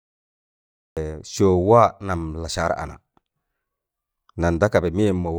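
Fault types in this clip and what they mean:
Cut-off start, 0 to 0.97 s: the clip opens on digital silence for just under a second, and the speech then appears abruptly at 0.97 s, already mid-sound, with no natural onset or fade-in. The capture or stream evidently began late, so the opening of the utterance was never recorded. What should have been a gradual attack becomes a hard edge where the signal jumps straight from nothing to full level.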